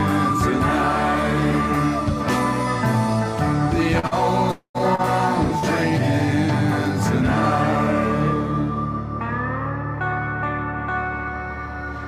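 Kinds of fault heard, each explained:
Short concealed packet loss: about 40 ms of audio at a time never reached the decoder, so the receiver patched each gap by stretching the last sound and blending back in. You get quick smears or wobbles at 3.99, 4.07, 4.95 and 5.59 s.
Long network dropout: from 4.51 to 4.77 s the sound carries on as a buzz or hiss that fades, and the last 80 ms or so go silent before audio returns. That's likely a quarter-second stretch where nothing arrived, so that part is simply lost.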